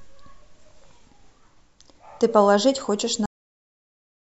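A speech recording with a cut-off end: at 3.26 s the audio stops mid-sound and drops straight to digital silence for the remaining 1.1 s or so. The final stretch of samples was never written to the file, so the sound is severed rather than finished. Unlike a fade-out or a noise gate closing, there is no decay, no tail and no gradual drop in level, just an abrupt edge into flat silence.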